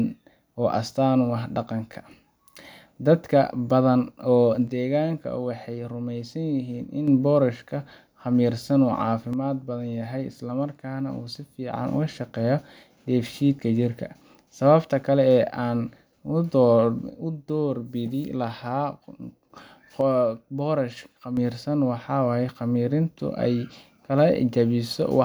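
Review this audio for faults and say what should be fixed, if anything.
One channel drops out, most likely, at 4.68–7.08 s (just before "boorashka khamirsan uu"), 9.33–11.73 s (just after it), 17.1–19.5 s and 20.01–21.37 s. Each time the speech falls abruptly by about 6 dB: with one side silent, the mono sum keeps only half of what both channels shared. Secure the stereo cabling and connectors, and monitor both channels' meters during recording.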